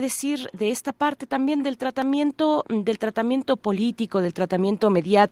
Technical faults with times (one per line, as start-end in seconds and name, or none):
0.57-5.32 automatic gain rising